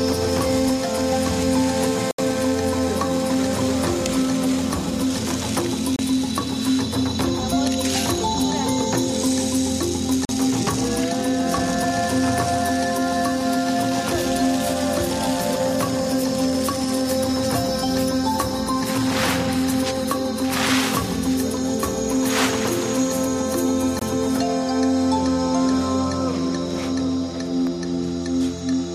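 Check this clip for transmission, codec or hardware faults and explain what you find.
Four brief dropouts to silence are audible, consistent with a Bluetooth stall. A Bluetooth stall occurs at 2.11 to 2.19 s (73 ms), 5.96 to 5.99 s (29 ms), 10.25 to 10.29 s (40 ms) and 23.99 to 24.02 s (23 ms). Radio interference likely delayed packets long enough for the receiving buffer to empty, so output halted until retransmitted data arrived. Each gap sounds like an abrupt mute, with the audio resuming cleanly afterwards.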